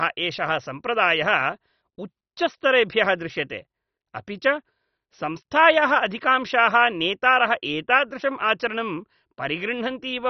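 Speech, most likely passed through heavy MP2 compression at a rate that fits roughly 32 kbps: starved of bits, the upper sub-bands are shut off, leaving nothing above 6.1 kHz, and the surviving bands are coarsely quantised, giving a dull, gurgling, granular sound throughout.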